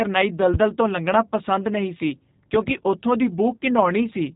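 G.729 codec throughout: the speech is rebuilt from vocal tract modelling and sparse pulses, cut off above 3.8 kHz, plainly rough and synthetic, fitting 8 kbit/s G.729A.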